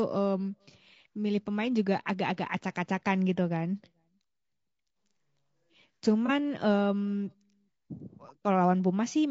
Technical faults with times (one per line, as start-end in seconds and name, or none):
0.00-9.30 low-delay AAC compression
6.26-6.30 AAC frame loss with concealment